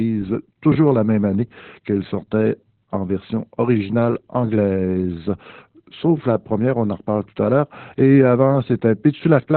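From start to finish the speech carries heavy Opus voice compression: nothing above 4.2 kHz, and a muffled, hoarse, faintly robotic texture that points to a very low bitrate, unlike simple low-pass filtering.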